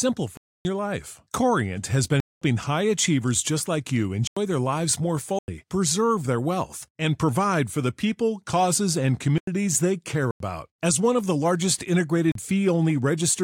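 Blocks of digital silence cut into the speech at 0.37–0.65 s, 2.20–2.42 s, 4.27–4.37 s, 5.39–5.48 s, 9.38–9.47 s, 10.31–10.40 s and 12.32–12.35 s. At each one the sound drops straight to silence and returns with no fade, leaving a short hole. The four identical holes of about 93 ms fit a 4096-sample output buffer that was not filled in time.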